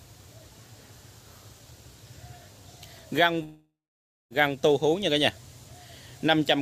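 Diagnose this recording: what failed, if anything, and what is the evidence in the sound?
From 3.43 to 4.32 s, a fading buzz, then 570 ms of flat waveform and blank spectrogram before audio resumes: likely a long network dropout.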